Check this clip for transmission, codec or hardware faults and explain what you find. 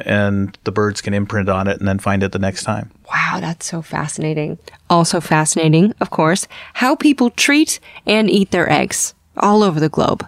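Nothing in the speech signal points to a transmission, codec or hardware problem, with level, continuity and bandwidth holding steady throughout.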